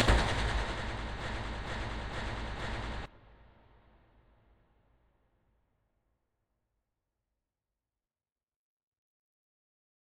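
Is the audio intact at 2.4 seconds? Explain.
No. From 1.21 to 3.06 s a broken-record loop repeats one 0.46 s fragment four times back to back, likely from a stalled stream resending its last buffer.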